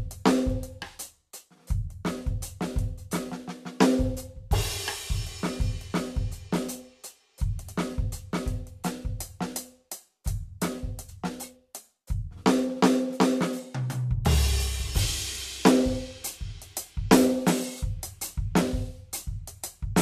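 At about 11.08 s the music jumps ahead without warning. There's a brief blip and then the playback picks up further along, so a chunk of the piece just isn't there and the phrase doesn't connect across the join. That's the signature of a stream segment skipped: most likely one segment of the segmented stream failed to load, and the player simply carried on with the next one rather than waiting for it.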